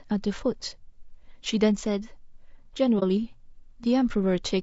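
From the start, the speech sounds rough and grainy. Noise fills the spaces between the pitch harmonics, and the top band sounds thin and synthetic. This is plainly audible codec damage, likely from low-delay AAC compression of the AAC-ELD kind used for video calls. Its short frames resolve pitch harmonics poorly. At a bitrate around 32 kbps, there are too few bits to keep the harmonic structure clean.

At 2.99 s the sound fades out. It returns at 3.03 s. This is AAC frame loss with muting. A frame went missing, and the decoder replaced its spectrum with silence. The overlapping windows smear the edges. The result is a brief dip of about 40 ms. The length fits a single lost frame.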